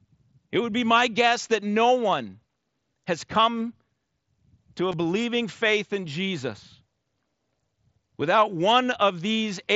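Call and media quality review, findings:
Concealed Bluetooth headset packet loss at 4.92 s, between "to a" and "believing faith in". Buzzy patch of about 15 ms, consistent with two lost frames; the receiver papered over the gap by repeating the best-matching recent waveform. Light mSBC grain audible.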